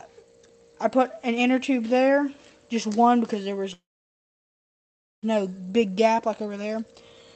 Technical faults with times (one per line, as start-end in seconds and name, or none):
3.73-5.25 call audio freeze